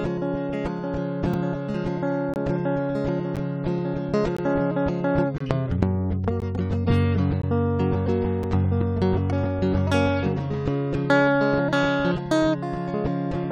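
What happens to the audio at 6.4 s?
At 6.40 s the music stops for about 17 ms, a hard-edged hole from a gap between stream segments, likely one-second segments. Unlike a dropout, no music is missing.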